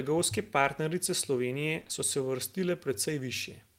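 A speech clip with short concealed packet loss in three back-to-back bursts at 1.79, 1.83 and 1.87 s, ending at 1.91 s just before "so se". About 20 ms of audio is synthesised from preceding sound each time, giving a smeared wobble rather than the hard silence of a plain dropout.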